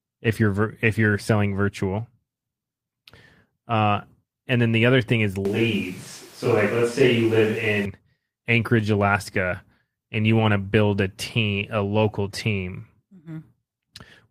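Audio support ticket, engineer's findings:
Lost packet rebuilt from error correction, 3.71 to 3.77 s. No gap, but a short stretch sounds rough and noisy. About 40 ms rebuilt, which fits two lost packets. The next packets carried low-bitrate copies that the decoder played in place.

Switch to a distant microphone, 5.45 to 7.85 s. Abrupt change to a roomy, hollow sound with thinner bass. Level about the same. Background noise roughly 25 dB below speech. Abrupt return afterwards. Likely close-mic dropout with fallback to a farther pickup.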